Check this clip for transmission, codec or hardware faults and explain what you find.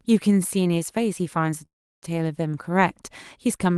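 One fault is audible. From 1.65 to 2.04 s the speech stops on a short fading continuation of the last sound, then about 0.33 s of silence, and resumes where it left off. This is likely a call audio freeze: delayed packets emptied the jitter buffer, inserting a 0.37 s gap without losing any speech.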